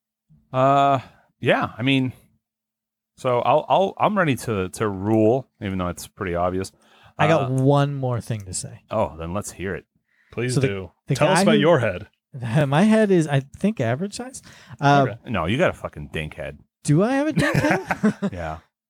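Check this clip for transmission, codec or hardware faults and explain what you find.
Two repeated-buffer faults occur in this speech. At 12.61 to 12.63 s, just after "about who your head", and at 17.56 to 17.58 s, just after "I have a dink", late data made the device replay its last buffer once. Each time, a 21 ms slice sounds twice, which fits a 1024-sample buffer, and is heard as a brief stutter or buzz. On the waveform, an identical segment appears twice with an abrupt discontinuity at the join. The spectrogram shows a thin vertical broadband line there.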